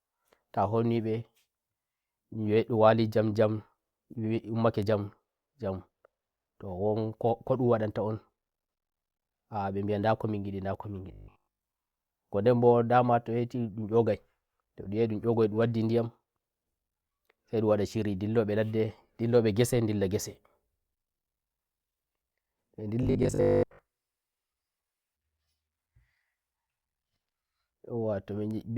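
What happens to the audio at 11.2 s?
Robotic sound from repeated short buffers, 11.12 to 11.64 s: the speech becomes a rigid 50 Hz metallic buzz throughout, likely from one 20 ms stretch being replayed while new audio is skipped.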